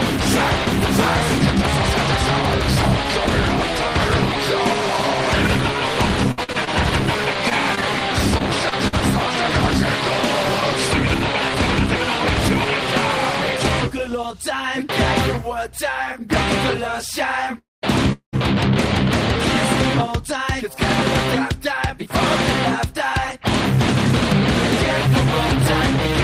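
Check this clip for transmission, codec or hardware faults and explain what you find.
Yes, there are two kinds of network fault in here, both from a call path.

Repeated packet loss (robotic sound) shows up in two bursts, 6.31 to 6.78 s and 7.50 to 8.94 s, each with six short holes of up to about 60 ms. Each hole gets patched by stretching the previous sound, so you hear choppy stutters with small bits actually gone.

Then there are two call audio freezes, at 17.58 to 17.84 s and 18.12 to 18.35 s. The sound hangs, decays into a brief buzz or hiss, then drops to silence for about 200 ms and 110 ms. The likely cause is delayed packets draining the jitter buffer. Playback then picks up where it stopped, so nothing is lost, just a gap inserted.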